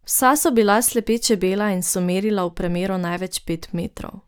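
No technical faults can be heard anywhere in the recording.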